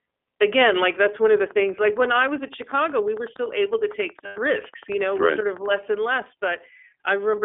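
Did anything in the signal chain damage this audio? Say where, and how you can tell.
Yes. The iLBC codec, at the codec stage, shapes the whole clip. The speech is confined to roughly 300 Hz to 3.4 kHz, with nothing above 4 kHz, and has a plainly rough, synthetic edge. This fits 20 ms frames coded independently at about 15.2 kbps.

A train of clicks runs from 1.51 s, after "that's one of the", to 5.76 s, before "and less". There are around fifty evenly spaced ticks at 10.8 per second, peaking about as loud as the speech itself. The likely cause is interference or a struggling interface at the analogue or converter stage.

Lost iLBC frames at the network stage leave a 100 ms gap from 4.26 s to 4.39 s, which fits about five 20 ms frames. The decoder fills it by repeating the last pitch cycle mixed with noise, giving a held, buzzy vowel before clean decoding resumes.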